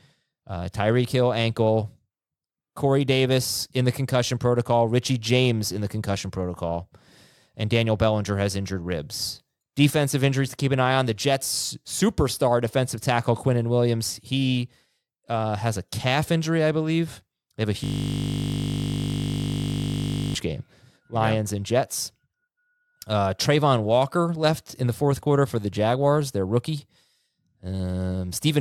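A system hang loop interrupts this speech clip from 17.84 to 20.35 s. The computer or its audio driver stalled, but the sound hardware kept replaying the last filled stretch of its ring buffer, which points to a 20 ms buffer. That single 20 ms slice repeats exactly, over a hundred times, so the speech gives way to a steady, mechanical buzz pitched at the 50 Hz loop rate. After about 2.5 s the system recovers and the speech resumes.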